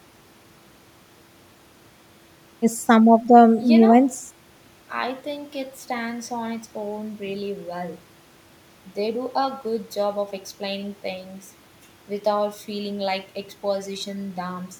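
No technical faults are audible.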